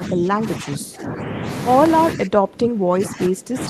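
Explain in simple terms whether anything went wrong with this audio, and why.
The speech drops sharply in level from the start to 1.47 s, and again from 2.15 s to the end. This is most likely speech suppressed in double talk. Someone on the other end spoke at the same time, and the echo canceller turned this talker down too.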